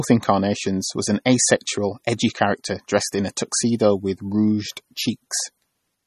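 From start to finish the speech has plainly audible codec damage, likely MP3 compression at a bitrate that fits roughly 32 kbps. Nothing survives above 13.1 kHz, and with bits that scarce, weaker frequency lines drop in and out between frames, so the sound turns watery.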